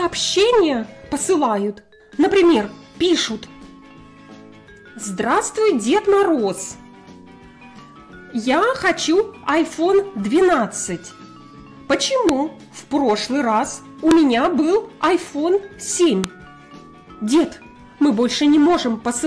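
Sharp, loud clicks land at 12.29 s, 14.11 s and 16.24 s, the signature of a file header played as audio: joined WAV pieces kept their headers, so those bytes sound as samples. Each shows as a brief spike on the waveform and a thin full-height vertical line on the spectrogram.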